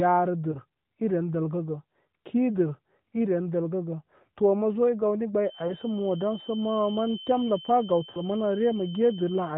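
Speech over a narrowband mobile link: the AMR-NB codec cuts everything above 4 kHz and gives the voice its light coding texture, which fits the 12.2 kbps mode. There are two kinds of fault on top of that.

The first is lost AMR speech frames. Three short glitches occur at 0.52 to 0.59 s, 5.68 to 5.74 s and 8.12 to 8.21 s. Each one sounds like a single 20 ms frame going missing. The decoder covers the gap by repeating the last good pitch and vocal tract settings at a lower level, so you hear a quick dip or warble rather than a hard dropout.

The second is a feedback whistle. From 5.39 s to the end there's a thin, steady tone at about 3.1 kHz, roughly 20 dB below the speech, swelling and fading slowly in level. It's most likely a loudspeaker-to-microphone loop sitting right on the edge of howling without tipping over. It stays just under the codec's 4 kHz ceiling, which is why it gets through.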